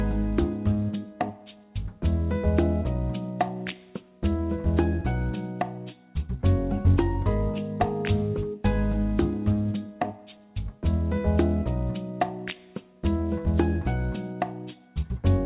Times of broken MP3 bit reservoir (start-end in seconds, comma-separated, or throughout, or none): none